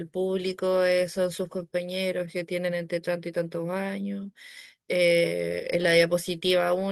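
A recording of speech with no technical fault to be heard anywhere in the signal.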